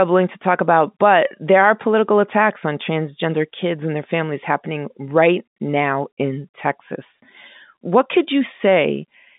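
No faults are present in this speech; the path is ordinary G.711 mu-law telephone coding at 64 kbps, with the line band running from about 150 Hz to 3.7 kHz and nothing above 3.8 kHz.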